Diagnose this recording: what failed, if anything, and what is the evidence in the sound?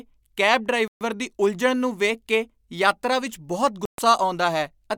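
The speech cuts to dead silence twice. The first gap runs from 0.88 to 1.01 s, about 130 ms, and the sound resumes on "ਦੀ ਉਲਝਣ ਨੂੰ ਵੇਖ". The second runs from 3.85 to 3.98 s, again about 130 ms. The failure sits in the wireless playback link. This is likely a Bluetooth stall. Interference delayed packets, so the headphones' buffer emptied and output halted. Playback restarted once the resent packets arrived.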